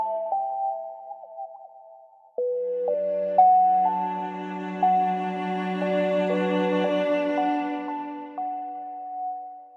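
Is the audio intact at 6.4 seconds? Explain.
Yes, the audio at 6.4 seconds is intact, with no dropout, click, distortion or other fault at that moment.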